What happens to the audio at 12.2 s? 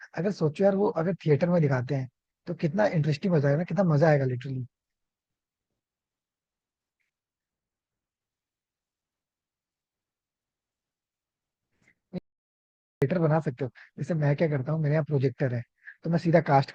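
The input was likely lost, leaving the recorder writing silence: an audio dropout to silence from 12.18 to 13.02 s cuts the speech off into total silence for about 0.84 s.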